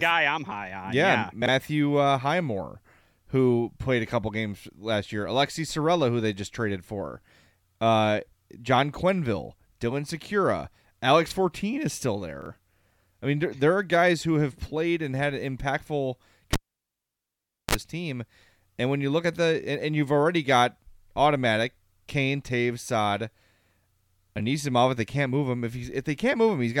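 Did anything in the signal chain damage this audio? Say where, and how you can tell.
Yes. There are chunks out of order in the driver or buffer stage, at 1.42, 11.28 and 12.42 s, the last one right after "is still". Each is a short jumbled blip. It sounds like 20 ms blocks being written late, two blocks late at 1.42 s and one block late at the other two. Nothing goes missing, but the late block plays after the ones meant to follow it. That leaves three hard joins per event.

The other one is in the analogue wiring: a cable pulled and plugged in. It starts at 16.53 s, just after "played and had impactful". You get a pop, then about 1.17 s of near silence. There's a brief 50 Hz mains buzz, roughly 38 ms long, while only the tip is making contact. A second pop follows as the signal comes back at 17.75 s, just before "team and when you".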